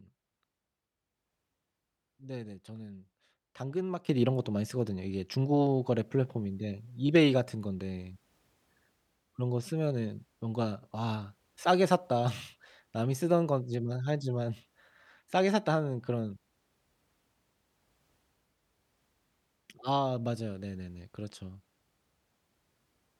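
A digital gain change was likely applied between two adjacent samples with no ramp, producing a sudden gain jump at 4.09 s. From that instant to the end, the speech and its background noise step up together by about 12 dB and stay there.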